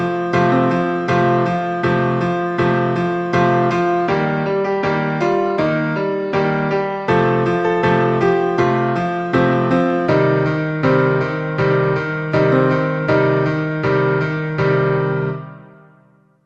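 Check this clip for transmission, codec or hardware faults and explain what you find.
No transmission, codec or hardware faults can be heard in the clip. It has passed through a WebRTC call path using Opus at 40 kbps, and its traces are the codec's usual coding noise and the top end stopping at about 12 kHz, which is simply that codec's chosen bandwidth.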